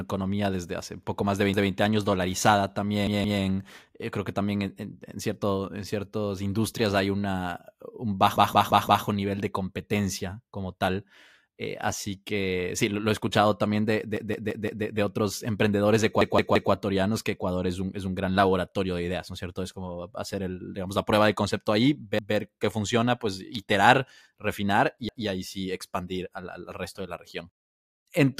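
Repeated buffer stutters at 1.54, 3.07, 8.36, 14.17, 16.21, 22.19 and 25.09 s: audio arrived late, so the last chunk of about 170 ms, which fits an 8192-sample buffer, replays one to four times with a hard join at each repeat.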